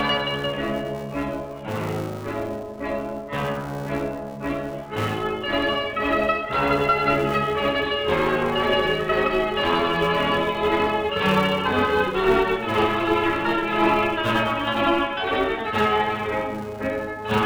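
Throughout, a filter restarted on every block adds a 345 Hz buzz, consistent with 128-sample blocks. Unlike steady hum, it follows the signal's level and vanishes in silence.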